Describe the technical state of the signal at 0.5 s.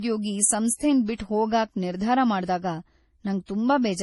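At 0.5 s, as throughout, the speech has a hard spectrogram edge at 11.5 kHz with stacked swirly, smeared artefacts, likely from transcoding between lossy codecs: low-rate MP3, then AAC-LC.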